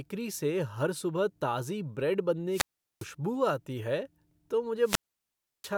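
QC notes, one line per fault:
2.50–3.08 s and 4.82–5.73 s, wireless microphone squelch dropout: twice the FM link fades, hiss swells, and the receiver's squelch mutes the output. The first comes right after "सुबह ताज़ी ब्रेड" with a 0.40 s hole, and the second has a 0.69 s hole. On the spectrogram, broadband noise brightens, then a near-blank gap appears. The waveform collapses to a flat line before the speech resumes.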